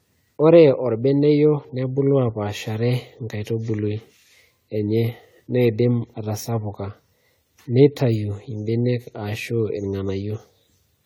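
From start to finish, the speech carries generation loss. It sounds swirly and hollow, with smeared consonant attacks. The damage goes well beyond what a single encode at this quality would leave. The character fits AAC-LC at around 64 kbit/s. The likely cause is repeated decoding and re-encoding, roughly seven passes. Each pass requantises on a shifted frame grid, so noise and spectral gaps pile up. Nothing sits above 20 kHz.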